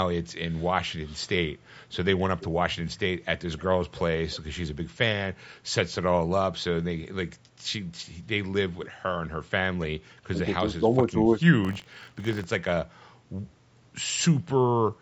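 At 3.58 to 3.63 s and again at 8.83 to 8.89 s, a brief, faint repeat of the speech trails behind the original, delayed by 307 ms and then 287 ms and sitting roughly 25 to 30 dB under it. That is an echo leak, most likely a far-end loudspeaker whose echo canceller let a residue return. The lag of about 300 ms separates it from room reverberation, which would smear the sound continuously instead of repeating it as a distinct, late scrap.

From 10.13 to 10.41 s the speech itself sinks for around 300 ms, at its deepest about 35 dB down. This is speech suppressed in double talk: both ends were likely talking at once, and the echo canceller treated the local talker as echo and attenuated it.

Between 11.63 and 12.45 s a steady rasping buzz at 46.9 Hz rides on the speech. It is buffer tearing. The writing and reading positions in a ring buffer have crossed, so a small slice of each period, a few percent, holds audio from roughly 40 ms earlier, joined hard at both edges. 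That rate fits a 1024-sample buffer. A clock-drift click would be sporadic, but this rattle repeats every period and stops whenever the signal does.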